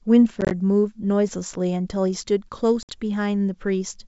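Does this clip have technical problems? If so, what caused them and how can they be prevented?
Yes, there's packet loss on an ADPCM call, in two places: 0.41 to 0.51 s, with about 50 ms lost in short gaps up to 20 ms, and 2.83 to 2.99 s, with 60 ms lost. Each hole is hard-edged silence, and afterwards the decoder's predictor and step size are out of step with the sender, so the sound comes back slightly distorted before settling. Adding jitter buffering, packet loss concealment, or redundancy/FEC on the link would prevent it.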